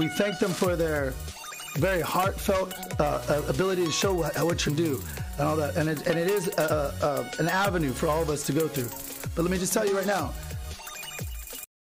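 Short blips of damaged data in the compressed stream occur at 2.74–2.76 s, 4.67–4.69 s, 6.69 s and 10.64–10.66 s. At each point corrupted frames throw the decoder out of sync, so the audio is briefly disrupted while it searches for the next valid frame header.

At 11.64 s the file has a cut-off end. The sound stops mid-event and drops straight to digital silence with no decay. The final buffers were never written, so the last 0.3 s of audio is missing.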